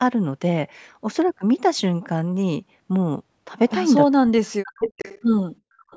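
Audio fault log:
4.08–4.9 s, speech suppressed in double talk: the voice drops by about 40 dB over roughly 0.7 s, likely because an echo canceller ducked everything while both sides talked.
4.68–5.21 s and 5.77 s to the end, echo leak: a delayed copy of the voice comes back 397 ms late, about 10 dB under the speech at first, then a faint trace about 30 dB down. That's likely a loudspeaker echo the canceller didn't fully remove.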